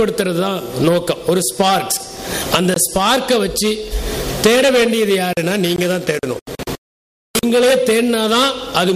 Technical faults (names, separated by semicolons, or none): gap between chunks